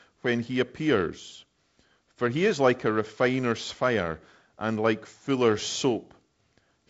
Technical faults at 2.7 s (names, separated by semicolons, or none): none